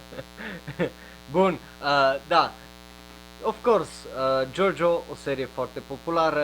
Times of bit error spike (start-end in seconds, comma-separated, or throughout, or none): none